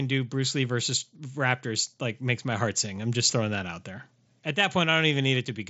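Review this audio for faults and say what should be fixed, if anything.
No faults; nothing needs fixing.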